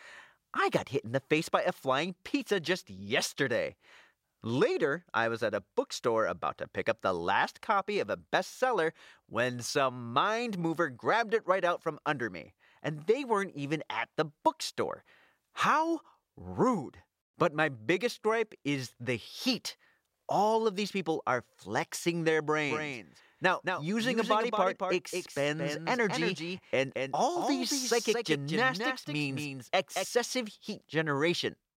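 From 22.69 s, just after "people are flexing their", to 30.05 s, the speech carries a doubled audio track: a second full-band copy trails the original by about a fifth of a second, roughly 5 dB quieter, with no decay or room colouring. It gives a clean, flat slapback on every syllable, and it cuts in and out abruptly at both ends. The likely cause is the signal being captured twice, once through a slower path.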